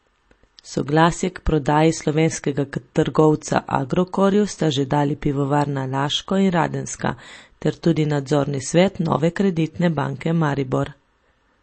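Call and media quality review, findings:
MP3 compression, throughout speech: plainly audible watery swirl, smeared attacks, nothing above 8.3 kHz. Likely a low-bitrate encode around 32 kbps, treble cut and weak spectral lines dropped frame to frame.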